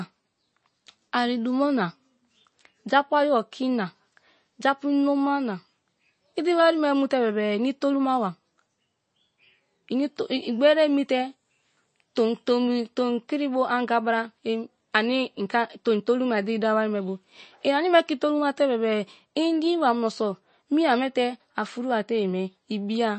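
Speech carrying plainly audible MP3 compression throughout, with a watery, swirling texture and blurred consonants. Nothing sounds above 8.3 kHz, a hard shelf on a spectrogram, with flickering holes below it, likely from an encoder starved at a low bitrate around 32 kbps.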